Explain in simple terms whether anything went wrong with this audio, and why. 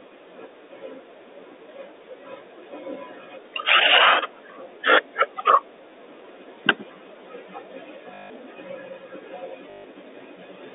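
Near the end, the sound hiccups twice: from 8.14 to 8.3 s and again from 9.7 to 9.84 s. That's packet loss with the last packet repeated. Chunks of audio never arrived, so the receiver kept replaying the last good scrap until fresh ones turned up. The loop buzzes at about 50 Hz, which fits 20 ms packets, giving that brief robotic stutter. The narrow phone-line sound is just normal G.711 telephone coding.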